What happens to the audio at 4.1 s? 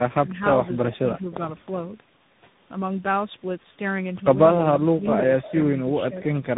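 At 4.1 s, as throughout, tandem speech coding: two speech codecs in series roughen and muffle speech, and a spectrogram shows nothing above 3.8 kHz with smeared harmonics.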